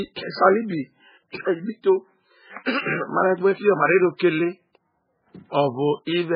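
An encoder likely starved of bits, MP3 compression at a very low rate, runs throughout: nothing above 5 kHz survives, leaving speech dull, watery and swirling, with smeared attacks.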